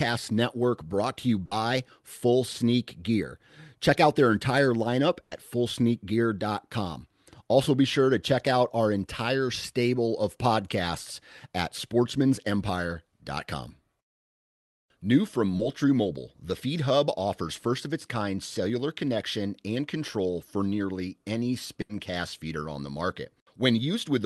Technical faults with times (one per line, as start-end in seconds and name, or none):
1.45-1.53 burst of packet loss
5.23-5.33 burst of packet loss
15.57-15.61 short concealed packet loss
21.81-21.91 burst of packet loss